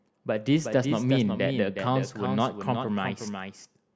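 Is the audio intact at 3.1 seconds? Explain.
No. At 3.1 s, as throughout the clip, the speech carries a doubled audio track: a second full-band copy trails the original by roughly 0.4 s, a few decibels quieter. Each syllable returns as a dry, distinct repeat with no decay or room colour, unlike a natural echo. The likely cause is the same signal being captured a second time over a slower path, or an edit that left two copies out of step.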